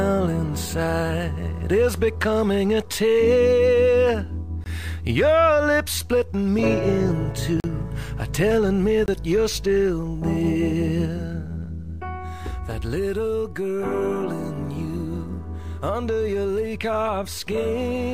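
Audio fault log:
4.64 to 9.08 s, block of digital silence: three short holes, 20 ms at 4.64 s, 40 ms at 7.6 s and 20 ms at 9.06 s. The audio drops straight to nothing and snaps back with no fade, as when the output buffer isn't filled in time or a calculation returns invalid numbers.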